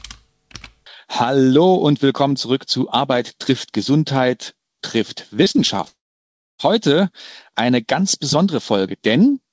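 From 5.44 to 5.88 s the connection kept dropping or delaying packets, producing repeated packet loss with a robotic sound. Each short hole, the longest about 28 ms, was patched by stretching the preceding sound, so roughly a quarter of that span is concealment and the audio turns choppy with pieces missing.

Right after, from 5.88 to 6.61 s, the stream most likely suffered a long network dropout. About 0.72 s never arrived; the receiver briefly extended the last sound before falling to near silence for most of that stretch, and the audio resumes without the lost part. Throughout, the G.722-style call path leaves nothing above 8 kHz.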